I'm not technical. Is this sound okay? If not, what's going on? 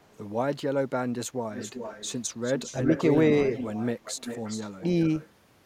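No, not quite. There's an echo leak: a quieter copy of the voice comes back about 0.4 seconds late, at 1.54 to 2.19, 2.43 to 2.76, 2.92 to 3.04, 3.55 to 3.86, 4.04 to 4.83 and 5.07 to 5.28 seconds. Likely someone's loudspeaker got picked up by their own microphone and sent back.

There's also speech suppressed in double talk: the voice briefly ducks at 2.72 to 2.78 and, more sharply, at 4.79 to 4.83 seconds. That's likely the echo filter getting confused while both sides overlapped and turning the talker down too.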